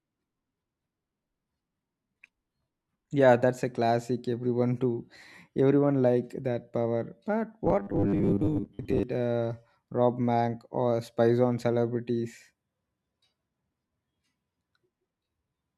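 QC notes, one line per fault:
7.65 to 9.03 s, robotic sound from repeated short buffers: the speech turns into a stiff metallic buzz locked at 100 Hz, loosely tracking the words. Likely audio arriving too slowly, so a 10 ms chunk gets looped and about half the real sound is skipped.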